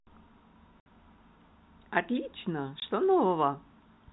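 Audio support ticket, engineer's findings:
Packet loss filled with silence. Hard dropouts at 0.80–0.86 s (60 ms) and 2.80–2.82 s (20 ms). Receiver jitter buffer plays silence for missing frames. Gap lengths fit 20 ms packets. Telephone-band G.711 path audible throughout.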